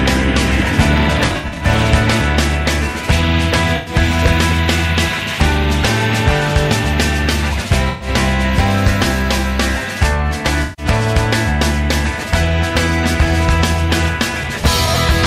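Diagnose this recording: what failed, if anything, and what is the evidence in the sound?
Codec stage: AAC frame loss with concealment at 1.26–1.66, 3.76–3.94, 7.90–8.08, 10.63–10.86 and 14.85 s. Each patch turns smeared, noisy or phasey as the decoder rebuilds missing frames from the last good spectrum. The first is scattered, with its longest run around 70 ms.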